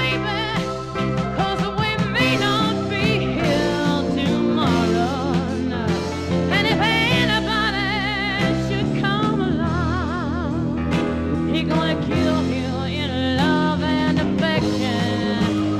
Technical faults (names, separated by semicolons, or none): none